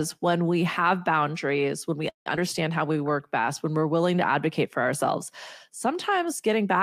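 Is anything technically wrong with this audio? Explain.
Yes, there are three network playback faults close together in this speech clip.

From 2.09 to 2.28 s there is a call audio freeze. The sound stops and is replaced by about 164 ms of fill. The last sound trails off briefly, then most of that time, about 130 ms, is silent. The likely cause is packets stalling in transit so the jitter buffer emptied. Speech resumes exactly where it halted, so nothing is lost, but everything after it is pushed back by 164 ms.

From 2.36 to 2.39 s there is a skip ahead. Roughly 70 ms of speech is dropped, and the two sides are bridged by only a 12 ms join. This is audio dropped on the way or by the jitter buffer while later audio was already waiting, which cancels part of the delay the freeze had just added. It is heard as a small abrupt jump, with part of a sound clipped off and the following sound arriving early.

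From 2.88 to 3.43 s there is a jitter buffer slow-down. The receiver stretches the audio by repeating single pitch periods and small pieces of pause, adding 70 ms over that half-second. Playback runs at about 89% speed with the pitch unchanged. Sounds in that stretch come out drawn-out and slightly sluggish as the buffer rebuilds its reserve.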